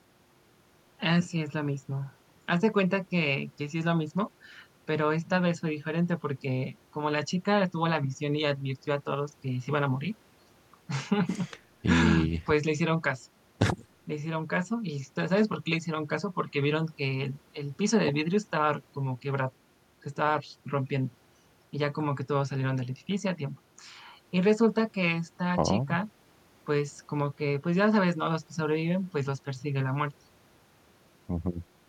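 No technical faults are audible anywhere in the speech recording, so there is nothing to flag.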